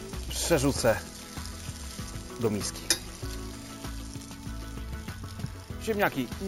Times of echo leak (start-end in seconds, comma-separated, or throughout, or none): none